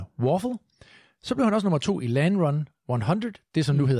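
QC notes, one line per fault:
No faults heard anywhere in the speech.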